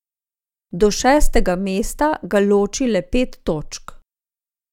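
No technical faults can be heard anywhere in the recording; the signal holds steady throughout.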